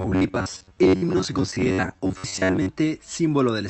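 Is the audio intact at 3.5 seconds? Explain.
Yes, the speech at 3.5 seconds is intact, with no dropout, glitch or other fault at that moment.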